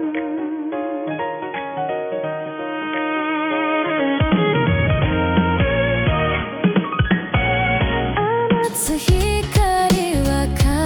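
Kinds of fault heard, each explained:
Input switched to a poorer device, 0 to 8.64 s: the sound is band-limited, with nothing above 3.4 kHz, dull and boxy over a faint added noise floor, then opens up at 8.64 s with no gap and little level change, likely from an input-device or call-profile switch.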